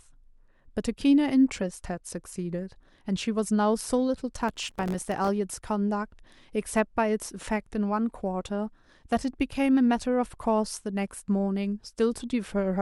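Processor overload crackle runs from 4.48 to 5.28 s: many tiny buffers, around 1.5 ms each, miss their deadlines and drop to silence, producing gritty crackle over the speech.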